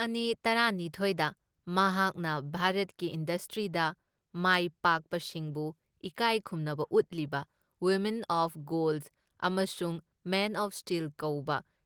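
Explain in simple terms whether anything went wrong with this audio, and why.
Nothing went wrong with this speech recording that a careful listener can pick out. Listening closely turns up no technical problem at any point in the clip.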